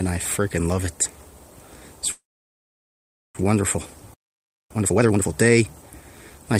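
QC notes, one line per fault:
2.11–3.37 s, call audio freeze: the sound smears into a short fading buzz, then drops to silence for about 1.1 s of the 1.23 s gap. That pattern likely comes from delayed packets draining the jitter buffer, so the receiver stretched the last bit of audio until it had nothing left. When the audio resumes, it picks up exactly where it stopped, so nothing is lost, but everything after this point now runs about 1.23 s late.
4.14–4.71 s, playback stall: the audio cuts out mid-flow and stays silent for about 0.56 s. There's no fading tail this time, just an abrupt stop and restart, which sounds like the player likely ran dry of data or got its output thread blocked. When it comes back, the catch-up follows right after it.
4.71–5.27 s, time-compressed catch-up: right after the stall, the sound rushes along at double speed for just over half a second while its pitch stays normal. 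The player is clearing its backlog by snipping out small slices and cross-fading the joins. After 5.27 s the pace drops back to normal.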